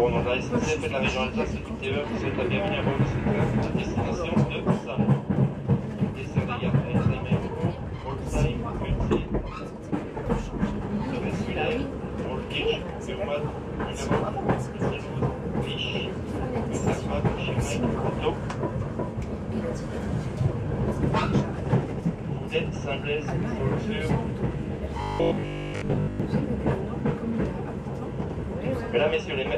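Near the end, from 25.02 to 26.20 s, the audio turns into a rigid, metallic buzz at 50 Hz: robotic sound from repeated short buffers. The likely cause is late-arriving data, with roughly two thirds of that stretch made of recycled 20 ms fragments instead of fresh audio.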